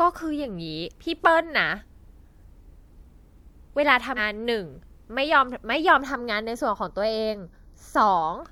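At 0.95 s the speech jumps forward, and again at 4.16 s, where a larger piece goes missing. These are compressed frames skipped: roughly 150 ms and then 300 ms vanish, which fits three and seven frames of 46.4 ms each.

From 6.01 s to 8.43 s the speech turns hollow, with a fixed notch around 3 kHz. This is comb filtering from a channel delay: one channel lags by about 0.2 ms, and summing to mono cancels evenly spaced frequencies.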